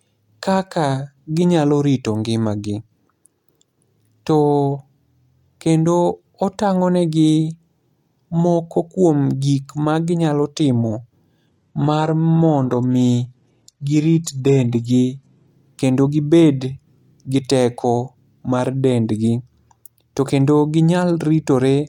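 At 11.47 s the adaptive stream switches to a lower-bitrate version, as a player does when the connection slows, and the sound fits a low-rate HE-AAC encoding. Until 15.47 s nothing above 12.4 kHz remains and codec artefacts rise. The quality changes abruptly, with no gap.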